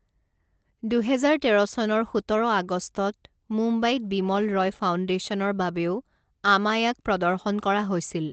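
No faults are audible in the speech; the top end stops at about 8 kHz, consistent with a wideband call codec running at a typical low bitrate.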